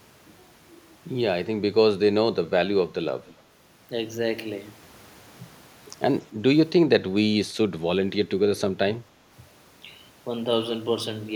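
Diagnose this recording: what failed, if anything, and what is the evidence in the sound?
Echo leak, in call processing: from 3.25 to 3.42 s a copy of the speech returns 285 ms late, roughly 30 dB down. On a spectrogram it appears as a faint, time-shifted repeat of the harmonics. Likely cause: a far-end echo canceller passing loudspeaker pickup back.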